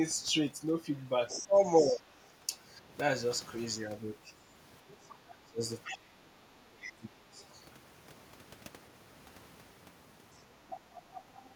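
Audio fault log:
0.96–2.01 s, 5.84–5.98 s, 6.81–6.92 s and 10.34–11.55 s: other side's voice leaking through. A second, fainter voice sits under the talker. It is roughly 10 dB down in the first stretch and about 15 dB down in the later ones. The two middle events are brief scraps. The first and last run for over a second. The likely cause is a loudspeaker at the talker's end whose sound reaches the microphone and is not fully removed by the echo canceller.
1.4–2.05 s, 4.91–5.6 s, 6.16–7.43 s and 10.69–11.23 s: speech suppressed in double talk. The talker's level sinks while both sides speak at once. The dip is about 15 dB at first, then about 30 dB and about 25 dB in the middle events, with the longest lasting over a second. It is a brief, shallow dip of about 10 dB near the end. The likely cause is an echo canceller that cannot separate the talker from the echo and turns both down.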